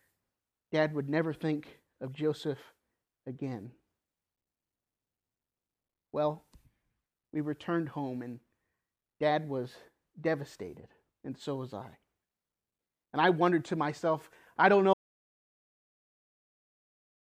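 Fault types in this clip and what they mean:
Audio dropout to silence: The speech cuts off at 14.94 s after "to myself I don't". Dead silence, with no room tone, runs to the end, likely from a lost input.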